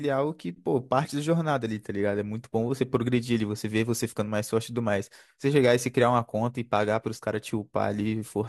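No technical faults heard.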